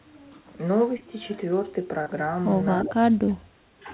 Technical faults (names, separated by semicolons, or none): short concealed packet loss; echo leak; speech suppressed in double talk